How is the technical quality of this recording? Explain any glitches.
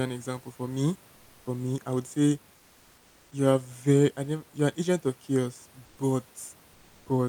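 The glitch is near the end: comfort noise in place of the background, from 5.85 to 5.97 s and again from 6.73 to 7.05 s. The natural room noise, about 34 dB under the speech, turns into a smooth, characterless hiss, about 2 dB quieter the first time and equally loud the second. That's likely discontinuous transmission: the sender went quiet in the pause and the receiver filled in with synthetic noise.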